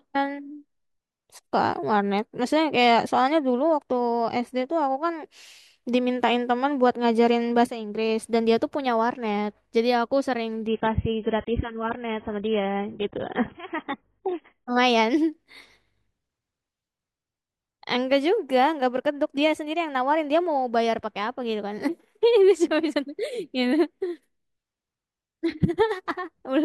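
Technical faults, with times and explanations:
10.67–14.67 s, adaptive stream at a lower bitrate: speech abruptly turns muffled and swirly, nothing above 3.8 kHz, no gap, pointing to a brief switch near 16 kbit/s.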